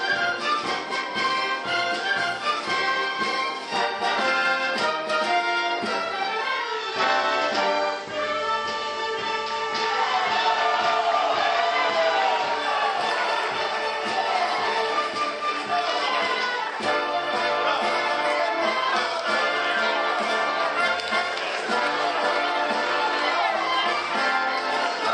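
From 6.54 s to 12.78 s the digital radio blends to the FM analogue broadcast, cross-fading over 396 ms. Hiss rises to around 25 dB below the signal, and the waveform level shifts about 1 dB.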